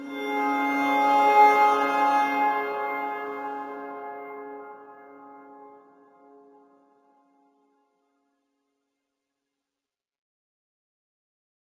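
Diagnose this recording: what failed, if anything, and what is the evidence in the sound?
Imaging from linear upsampling is present throughout, at the sample-rate conversion stage: a dulled top end with faint mirror images around 8 to 16 kHz, roughly 35 dB down, consistent with straight-line interpolation from 16 kHz to 48 kHz.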